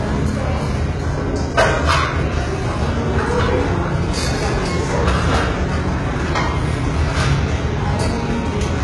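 Throughout, the top end is rebuilt and gritty, with nothing above 11.5 kHz. Heavy damage like this likely comes from HE-AAC compression at a very low bitrate, around 12 kbps.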